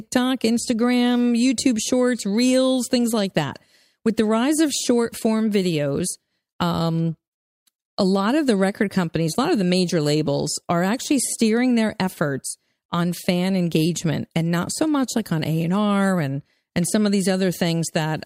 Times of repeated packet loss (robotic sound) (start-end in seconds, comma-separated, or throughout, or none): none